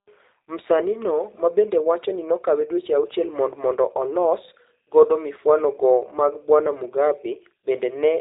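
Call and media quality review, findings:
G.729 codec damage, whole clip. Speech band-limited, nothing above about 3.8 kHz. Plainly rough, buzzy, synthetic texture. Probable component: narrowband VoIP encoder. Mechanism: speech rebuilt from a filter, a pitch predictor and sparse pulses, which fits G.729A at 8 kbit/s.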